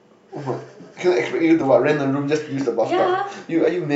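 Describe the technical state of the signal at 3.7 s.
Right around 3.7 s, between 3.65 and 3.69 s, compressed frames are skipped. The decoder never plays one or more frames, either because they are missing from the stream or because it rejected them as corrupt. About 20 ms of speech simply drops out. Playback lands further ahead than it should.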